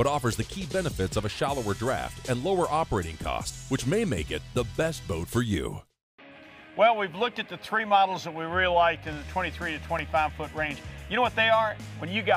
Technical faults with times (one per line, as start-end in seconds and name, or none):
9.13-9.99 CD scratch ticks